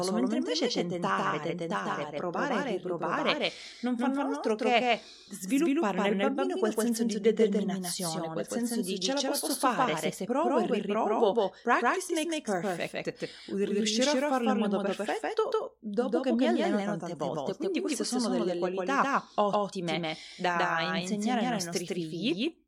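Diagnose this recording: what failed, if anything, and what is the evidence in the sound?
The speech carries a doubled audio track for its whole length. A second full-band copy trails the first by around 150 ms at about the same level, so every syllable onset repeats as a crisp slap. Unlike room echo or a feedback echo from call processing, the copy has no decay tail, no tonal colouring and no further repeats. A single fixed offset like this most likely comes from the capture routing, where the same signal is recorded twice through a second, slower path.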